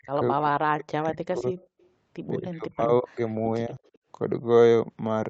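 From 0.0 to 1.56 s and from 2.38 to 3.51 s, the speech sinks sharply, by up to about 40 dB. A brief dip of about 10 dB follows at 3.67 to 3.74 s. This is likely speech suppressed in double talk, where the echo canceller ducked the talker while the far side spoke. From 1.58 to 1.88 s and again at 3.86 to 3.98 s, a faint copy of the voice trails by about 0.21 s, at roughly 35 to 40 dB below the speech. That is likely echo leak from a loudspeaker whose canceller let residue through.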